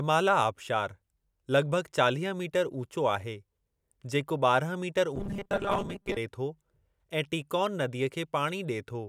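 From 5.16 to 6.17 s, just before "थो ऐं टीकॉन नदीअ", the speech turns into a rigid metallic buzz at 200 Hz, robotic sound likely from repeated 5 ms buffers covering about half the audio. The waveform shows identical repeating cycles, and the spectrogram shows evenly spaced, flat harmonics.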